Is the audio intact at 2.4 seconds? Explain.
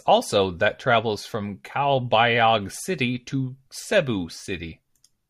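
Yes, at 2.4 seconds the audio is intact, with no dropout, click, distortion or other fault at that moment.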